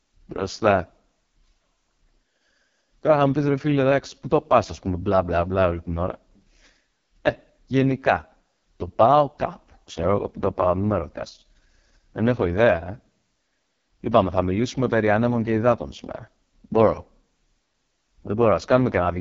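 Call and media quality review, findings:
AMR wideband (HD Voice) codec at its lowest rate, throughout. Bit budget consistent with about 6.6 kbit/s leaves the pulse-excited vocal tract model too coarse: speech rough, raspy, heavily degraded. Band above 6.4 kHz is synthetic shaped noise, nothing above 7.5 kHz.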